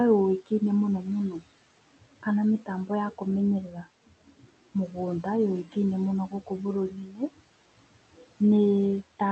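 Noise suppressor artifacts run through the whole clip. The suppressor lowers the bands it takes for steady room noise, about 17 dB of reduction, frame by frame. The background, sitting roughly 19 dB below the speech, drops away in the gaps and returns underneath the talking. The audio also stops near 8 kHz, consistent with a band-limited Opus call path.

Speech cut by the noise suppressor occurs from 0.46 to 1.48 s and again from 2.01 to 8.41 s. Here the suppressor misreads parts of the speech as noise and pulls them down with the background, by up to about 16 dB in the first stretch and about 19 dB in the second. The affected portions add up to around a third of a second in the first span and roughly one and a half seconds in the second. Soft consonants and word endings sound swallowed or faint, as if they drop behind the rest of the speech.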